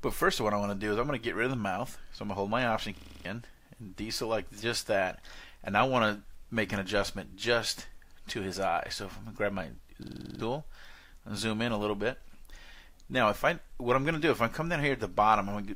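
At 2.97 s and 10.03 s, a system hang loop repeats one 46 ms fragment identically, six then eight times, a 21.5 Hz stutter, unlike a dropout's silence.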